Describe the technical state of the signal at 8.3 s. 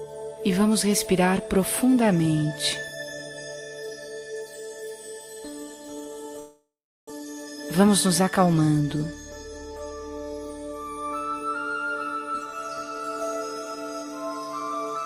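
At 8.3 s a jitter buffer speed-up is under way, spanning 7.21 to 8.62 s. Short pitch-period pieces, around 70 ms in all, are cut repeatedly, so the sound runs 5% faster at unchanged pitch and feels hurried. On a spectrogram, harmonics stay level while events crowd together.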